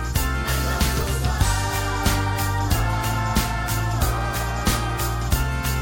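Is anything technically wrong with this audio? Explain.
Yes. From about 0.98 to 1.02 s there is damaged data in the compressed stream. For roughly 40 ms the decoder is fed corrupt bytes. It misreads those frames, loses sync and hunts for the next valid frame header. The result is a brief glitch. On a spectrogram it shows as a short vertical disruption. In the waveform it appears as a ragged, discontinuous patch.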